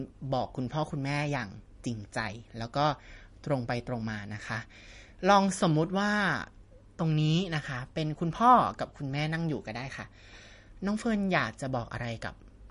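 From start to finish the speech has a watery, swirly quality, and the top end stops dead at about 10.6 kHz. That's likely MP3 compression with too few bits, around 40 kbps by the sound of it, so the encoder drops the treble and lets weak detail flicker in and out.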